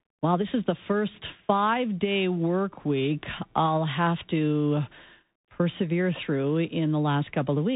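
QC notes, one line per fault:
Throughout, Bluetooth CVSD headset codec: the speech is squeezed into a narrow band with nothing above 3.8 kHz, so it has that boxy headset quality. The codec sends just one up-or-down bit per sample and adapts its step size, and it can't keep pace with loud, bright moments, so those smear and distort. S sounds come out scratchy, and a grainy hiss sits under everything. The damage is plainly audible and fits a 64 kbps CVSD link.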